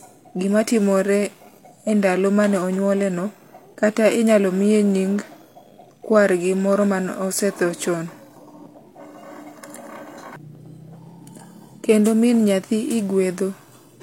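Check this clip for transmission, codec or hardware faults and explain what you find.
One codec fault runs through the whole recording: low-bitrate audio saved at a high bitrate.

From start to finish, the speech carries nothing above 16.3 kHz, and the coarse coding detail of a heavily compressed source stays audible despite the generous container. The likely cause is a low-bitrate encode, consistent with HE-AAC at around 32 kbit/s, later re-encoded as MP3 at around 320 kbit/s. That second pass adds file size but cannot rebuild the content the first codec discarded, so the earlier artefacts and missing top end remain.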